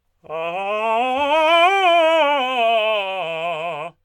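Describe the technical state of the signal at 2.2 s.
A bit error spike sits at 2.17 s. A single flipped bit in the digital data throws the stored value off by a power of two for an instant, and it snaps straight back. The tick is so short that it fits three corrupted samples in a row. It comes out as one sharp click spread across the whole spectrum, with no relation to the music around it.

Sample clock jitter also runs through this moment, as it does across the clip. The converter's clock wanders by around a microsecond, so each sample is taken slightly early or late. The resulting error scales with how steeply the waveform is moving. Here it sits roughly 40 dB below the music, a faint hiss-like roughness that swells on loud, bright passages.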